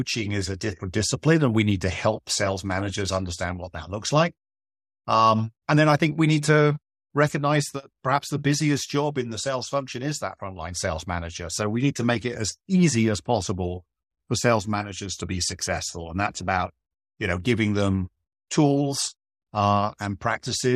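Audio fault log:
Nothing stood out on listening to this speech recording.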